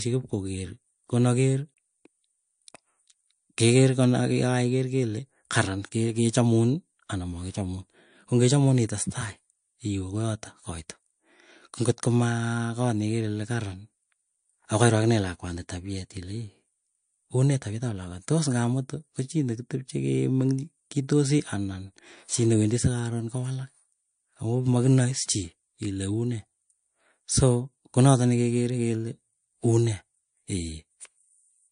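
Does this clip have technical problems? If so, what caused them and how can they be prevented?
Yes. Throughout the speech, everything above 9.8 kHz is missing, with a flat ceiling on a spectrogram, and the artefacts of the first encoding remain. This is likely low-bitrate audio saved at a high bitrate: a roughly 50 kbit/s MP3 re-encoded at 320 kbit/s, which cannot restore what was discarded. To prevent it, always encode from the original uncompressed source rather than from an existing lossy file.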